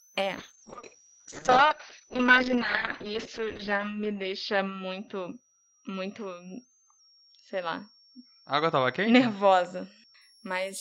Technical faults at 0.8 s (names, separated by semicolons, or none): switching supply whistle; call bitrate drop